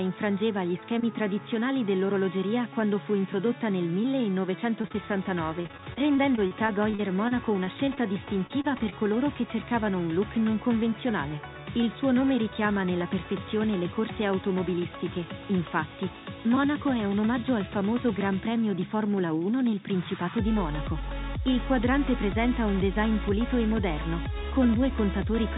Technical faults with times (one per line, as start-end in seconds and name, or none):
4.82-4.96 short concealed packet loss
5.62-7.99 repeated packet loss (robotic sound)
8.47-8.94 repeated packet loss (robotic sound)